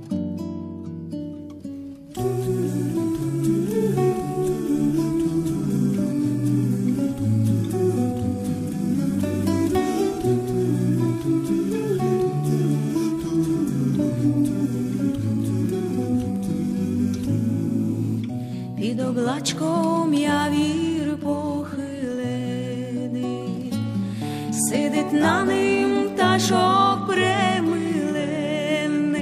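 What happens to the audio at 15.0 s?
Nothing goes wrong at 15.0 s; the audio plays through that moment intact, with no dropout, click or other fault.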